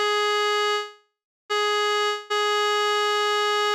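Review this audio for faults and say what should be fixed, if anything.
At 0.71 s the music stalls until 1.52 s. That's a call audio freeze: the last sound hangs on as a fading buzz, then about 0.35 s of silence, and the music picks up exactly where it stopped, now running roughly 0.78 s late. The likely cause is delayed packets draining the jitter buffer. An adaptive jitter buffer with a bit more headroom would ride that out.

From 2.06 to 2.32 s there's a long network dropout. A fading buzz covers the hole, and when the music returns about 0.24 s of it is simply gone, so it jumps ahead. Most likely packets were lost outright rather than delayed. Forward error correction or redundant packets on that link would help.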